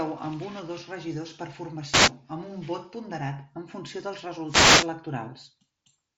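After "o dos regidors per", from 1.89 to 2.12 s, and after "ponderat en funció dels", from 4.45 to 4.91 s, wireless microphone noise hits swish through as the radio signal fades. They appear as broadband static smearing the spectrogram up to the headset's 7.7 kHz ceiling.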